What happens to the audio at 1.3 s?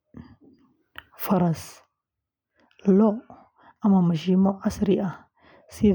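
Nothing goes wrong at 1.3 s: the speech carries on intact through that moment, with no dropout, click, distortion or other fault to be heard.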